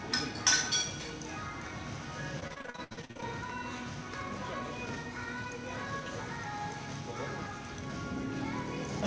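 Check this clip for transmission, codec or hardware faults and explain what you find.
One transmission fault is present, heard through a call path whose sound stops at 8 kHz. From 2.40 to 3.24 s there is repeated packet loss (robotic sound): fifteen gaps, the longest 67 ms, with about half the stretch patched by extending the previous sound. This gives a choppy sound with pieces missing rather than the single clean hole of an isolated dropout.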